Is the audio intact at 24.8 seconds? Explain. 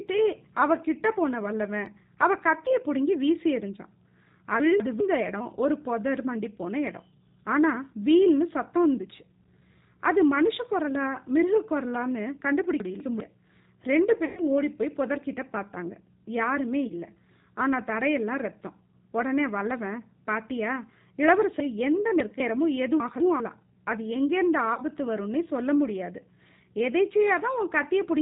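No. From 24.74 to 24.82 s the speech turns into a fading buzzy tone or coloured noise, then comes back weak and distorted. This is VoIP packet loss concealed by the speech codec: about 30 ms went missing, which fits a single lost packet. The decoder kept extending its last pitch and vocal tract filter at falling gain, and because each frame builds on the one before, the damage lasts past the gap.

Under that, the sound there is rough, synthetic and dull, with nothing above 4 kHz. This is the G.729 codec, here the G.729A variant at 8 kbit/s. It rebuilds speech from a filter, a pitch predictor and a few pulses per frame, and its damage is plainly audible.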